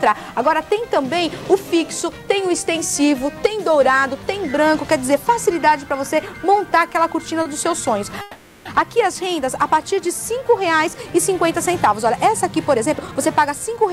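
At 7.42 to 7.46 s a short stall from a late packet holds the sound for about 30 ms while the jitter buffer waits, then resumes where it left off. It is a brief smeared hold with a faint buzz, and on a spectrogram the harmonics run flat and repeat for that sliver.

From 8.21 to 8.66 s comes a call audio freeze. The last sound is carried on as a fading buzzy continuation for about 440 ms, never dropping to silence, before the audio picks up again with nothing lost. The likely cause is packets held up in transit draining the jitter buffer. The waveform shows a repeating, decaying pattern, and the spectrogram shows frozen, blurring bands.

From 12.76 to 13.87 s a jitter buffer speed-up plays the audio at about 119% speed with unchanged pitch, trimming roughly a fifth of a second overall by cutting out small pitch-period pieces. It sounds hurried, and on a spectrogram the events crowd closer together while the harmonic spacing stays the same.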